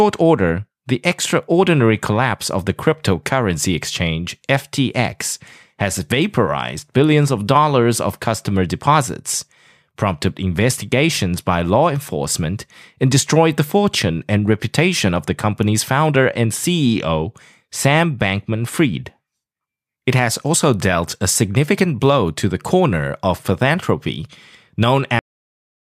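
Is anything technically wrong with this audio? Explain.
Yes. The speech has a cut-off end at 25.19 s: the sound stops abruptly in the middle of an utterance rather than finishing or fading. The final buffers of audio were never written out or played back, so the signal jumps straight to digital silence with no natural decay or room tail. That dead silence then runs to the end of the file at 25.91 s, about 0.7 s of nothing.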